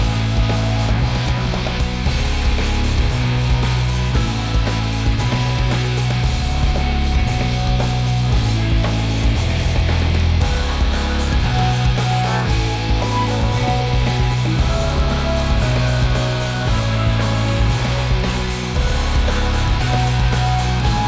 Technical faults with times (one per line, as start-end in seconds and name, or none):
7.10-21.08 resampler restarted on every block